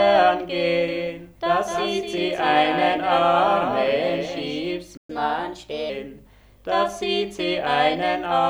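From 0.88 s to 4.60 s, a doubled audio track appears. A second full-band copy of the sound runs about a third of a second behind the first. It sits about 5 dB lower. It has no decay and no room colour, so it reads as a clean repeat rather than an echo. It cuts in abruptly at 0.88 s and drops out just as sharply at 4.60 s. The likely cause is the same signal being captured twice through a slower second path.

At 4.97 s a playback stall interrupts the sound mid-flow. The output goes silent for 120 ms. Then the sound picks up again at 5.10 s. This gap sounds like the player running dry of data, or its thread being blocked, until it could refill.

From 5.10 s to 5.90 s comes catch-up at higher speed. The sound plays at 1.15 times normal speed. Its pitch rises by about two semitones. This is the player resampling its backlog to win back the time lost in the stall. At 5.90 s both speed and pitch drop back to normal.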